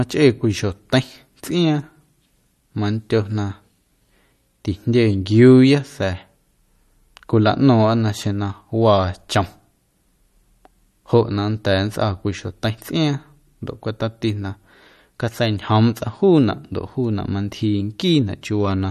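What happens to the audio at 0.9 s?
At 0.9 s the speech sounds watery and swirly, with a metallic, chirping edge on s sounds, and there is no content above 12.5 kHz. This persists through the whole clip rather than being a brief event. The likely cause is MP3 compression at a low bitrate, about what 48 kbps would give. Short of bits, the encoder cuts the treble at a fixed point and drops weak frequency lines that flicker on and off from frame to frame, which produces the swirling.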